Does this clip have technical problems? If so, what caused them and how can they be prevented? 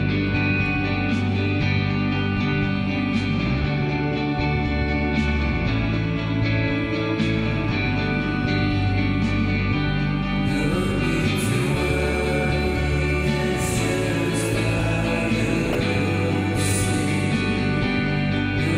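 Yes. DAB burbling occurs at 15.66 to 15.75 s. Weak reception let bit errors slip past the error correction into the MP2 audio data. Corrupted samples put short blips of noise in single sub-bands, giving a brief disturbance over roughly 90 ms, which fits about four MP2 frames. Improving reception with a better-placed or higher-gain antenna keeps the bit error rate low enough for the error correction to cope.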